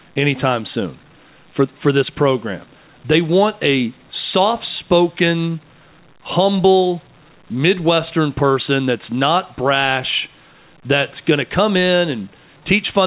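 No technical faults are audible.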